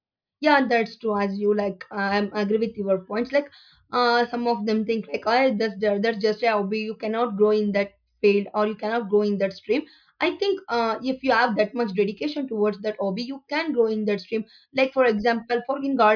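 No technical faults can be heard in this speech recording.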